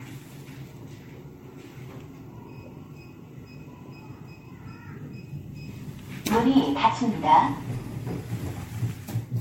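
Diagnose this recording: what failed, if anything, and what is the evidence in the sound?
Generation loss runs through the whole recording, at the codec stage. The sound is swirly and hollow, with smeared transients and blurred attacks, and nothing is present above 16.6 kHz. The character points to MP3 at around 64 kbit/s, likely decoded and re-encoded about five times. Each pass quantises again on a shifted frame grid, so the noise and spectral holes pile up beyond what a single encode would leave.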